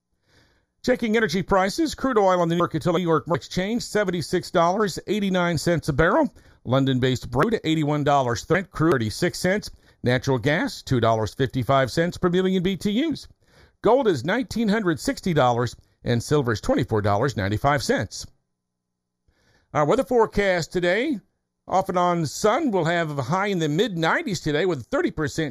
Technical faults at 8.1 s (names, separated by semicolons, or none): channel delay (comb filtering); chunks out of order